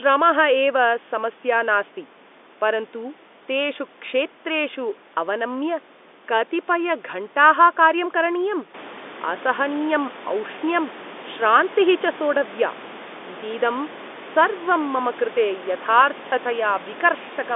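No technical faults are present.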